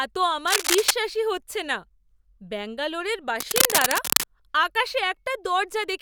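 From 0.47 to 0.91 s and again from 3.39 to 4.24 s, cable scratch noise rustles over the speech, first at roughly speech level, then louder. Likely a worn connector being moved; unlike steady hiss or isolated clicks, these bursts are dense, uneven and short-lived.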